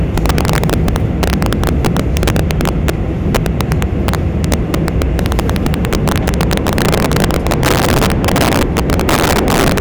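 Integer overflow runs through the whole recording: pushed about 7 dB too hot, a small share of peaks wrap to the opposite sign, giving harsh cracks on loud sounds.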